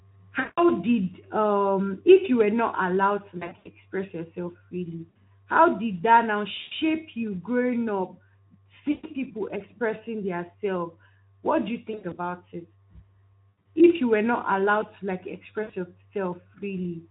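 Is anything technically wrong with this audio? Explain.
Yes. The speech has VoIP packet loss concealed by the speech codec at 0.39–0.72, 3.37–3.68, 5.09–5.17, 6.61–6.72, 8.91–9.11, 11.91–12.19, 13.51–13.66 and 15.63–15.74 s. Each gap loses 60 to 180 ms of audio, and some are scattered runs. The decoder, which sounds like Speex, stretches its last pitch and filter while fading the gain. The speech smears into a buzzy tone or coloured noise that fades, and stays weak briefly afterwards.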